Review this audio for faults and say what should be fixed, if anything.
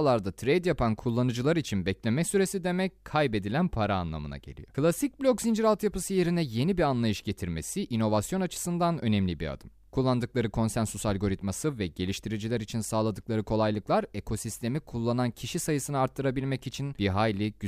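No faults heard; nothing needs fixing.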